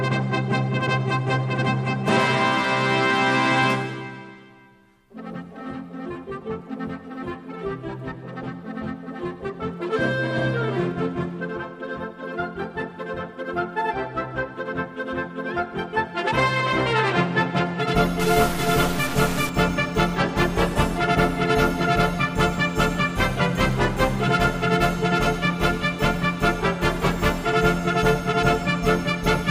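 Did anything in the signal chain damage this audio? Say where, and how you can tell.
Yes. From 18.20 to 19.49 s there is a stuck bit, likely in the converter. One fixed bit offsets samples by steps of about -25 dBFS, giving buzzy distortion, jagged waveform steps and broadband spectrogram hash.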